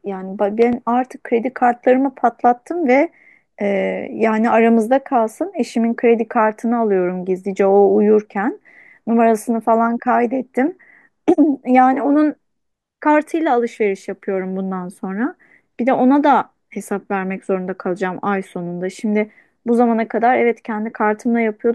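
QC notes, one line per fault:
0.62–0.75 s, loud pop: A sudden voltage step or pulse, likely from a plug, switch, static discharge or driver glitch, entered the signal chain. The stages after it shaped that pulse into two sharp pops in quick succession, peaking a few dB above the speech. The speech continues underneath without interruption, so the pops sit on top of the audio rather than replacing it.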